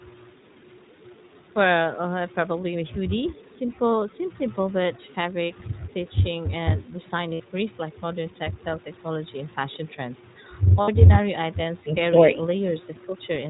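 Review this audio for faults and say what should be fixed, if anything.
iLBC codec, throughout: each 20 ms frame's excitation is coded on its own and nothing passes above 4 kHz, so the speech sounds plainly rough, synthetic and narrowband, consistent with the 15.2 kbps mode.

Lost iLBC frames, at 7.34 to 7.42 s and 10.82 to 10.89 s: about 60 ms each, which fits three 20 ms frames, filled by the decoder repeating the last pitch cycle with noise, heard as a brief buzzy held vowel before speech recovers.

To prevent these, use a wideband codec with a higher bitrate, and reduce packet loss on the network path or add forward error correction.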